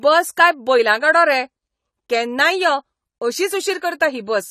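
Throughout the speech, the sound is dull and smeared, with a fizzy, warbling edge on sibilants and nothing above about 14.1 kHz. This is likely AAC compression: AAC-LC squeezed to a rate that fits roughly 32 kbps drops the top band and coarsely quantises what remains.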